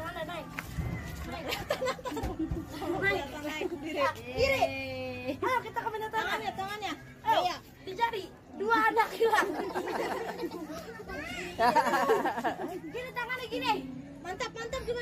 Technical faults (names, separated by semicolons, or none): none